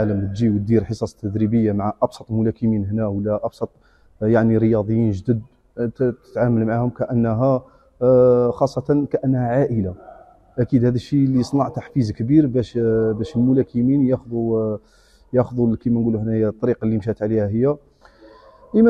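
No technical faults can be heard anywhere in the audio. Nothing interrupts or disturbs the sound at any point.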